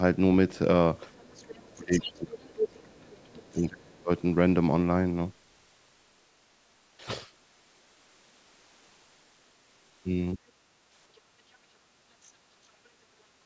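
At 1.11 s a brief scrap of a second voice appears, lasting until 1.24 s. It is very faint, well below the main speech. This is the other side's voice leaking through. The likely cause is a loudspeaker on the talker's device, with the echo canceller failing to clear it from the microphone. From 1.25 s to 4.11 s the talker's speech is pushed down hard. The deepest dips are large, cutting parts almost to silence. This is speech suppressed in double talk. Both sides were likely talking at once, and the canceller turned everything down. Inside that stretch the leak returns twice. From 1.95 s to 2.1 s it sits fairly low. From 2.61 s to 2.68 s it is nearly as loud as the speech itself. At 10.35 s a second, much milder dip occurs, lasting 40 ms. It is only a slight drop, the same suppression in miniature. The sound stops at 8 kHz, which fits ordinary call microphone processing.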